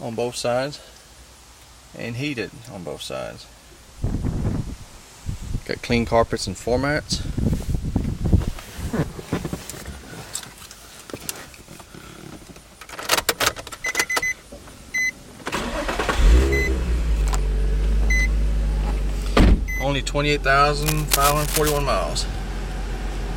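The audio carries a burst of cable scratch noise from 20.82 to 21.83 s, about one second of dense, uneven scratching and rustling sitting only slightly below the main signal. The likely cause is a worn cable, connector or control being moved, so its contact resistance jumps around rapidly. On a waveform this shows as a jagged cluster of spiky bursts; a spectrogram shows ragged broadband vertical streaks across that second.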